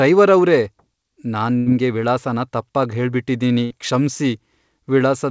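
Speech over a call link, with nothing above 8 kHz, which points to a wideband codec such as G.722. A burst of packet loss occurs at 1.58–1.68 s and 3.64–3.72 s. Each gap is filled with a fading, held continuation of the last sound, and the speech then resumes with about 80 ms and 60 ms missing. A clean dropout would instead leave silence.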